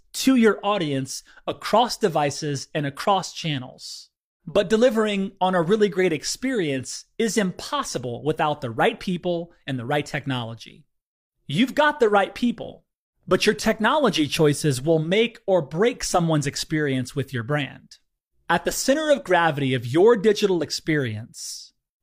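No technical faults are audible.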